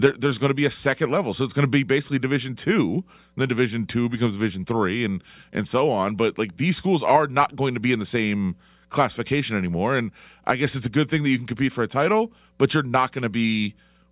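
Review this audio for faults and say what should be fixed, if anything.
Nothing stood out on listening to the speech, so there is nothing here that needs fixing.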